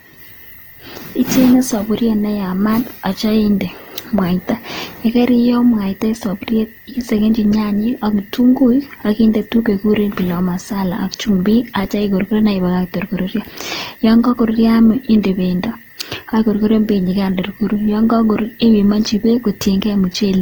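Throughout, the speech turns grainy and rough, with noise filling bands rather than MP3-style swirl, and extends to 20.2 kHz: likely Opus compression, fitting about 24 kbps.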